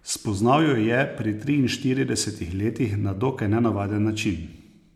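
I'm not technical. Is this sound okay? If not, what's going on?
Yes, this speech recording sounds fine, with nothing going wrong in it. You can listen to it without anything technical getting in the way.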